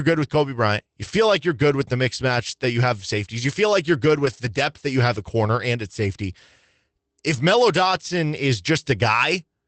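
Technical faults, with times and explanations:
1.03–1.09 s and 4.25–4.47 s, lost packet rebuilt from error correction: Two short stretches turn rough and grainy, with no gap in the sound. The first lasts about 40 ms, just before "like you're good with". The second lasts about 120 ms, between "feel like you're good" and "depth that you have". Packets went missing, but each following packet held a low-bitrate copy. The Opus decoder played those copies instead. They carry less detail, so the sound coarsens briefly. The lengths fit runs of 20 ms packets.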